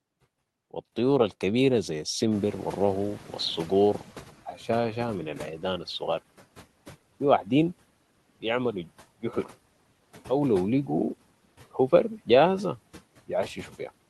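From 2.31 to 4.49 s, after "و الطيور الكبيرة ذي", the noise suppressor is catching up: its noise estimate lags the room noise jumping about 17 dB, so the background leaks through before sinking by about 12 dB over 2.18 s. At 9.22 to 9.51 s, after "و في واحدين بيعملو", speech is cut by the noise suppressor, which mistakes it for noise and pulls roughly a tenth of a second down by up to about 10 dB, leaving it swallowed.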